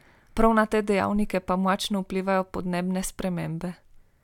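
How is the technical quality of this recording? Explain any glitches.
No glitches or technical faults can be heard here.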